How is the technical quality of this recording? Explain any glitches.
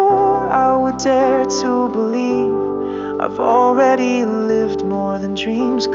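No glitches to explain here: nothing drops out, skips or jumps anywhere in the recording, so there's nothing that needs accounting for.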